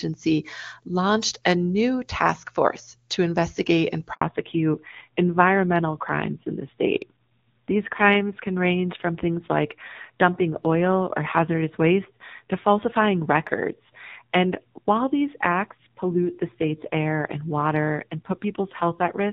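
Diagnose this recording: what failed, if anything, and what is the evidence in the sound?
Network stage first: there's a handover gap at 4.13 to 4.21 s, about 80 ms where the speech just drops out. The voice dies off quickly and there's clean silence until the new link comes up, so whatever was said in that window is gone. That's the call being passed between networks with no speech frames getting through during the switch.

Then, right as audio resumes at 4.21 s, the call falls back to narrowband and stays there to the end. Up to the gap you get full HD Voice, crisp and clean, which fits AMR-WB running at a high rate like 23.85 kbit/s. After it, nothing above 4 kHz survives, and the voice turns duller and a bit rough. That's the codec stage renegotiating down to something like AMR-NB at a low rate such as 7.4 kbit/s.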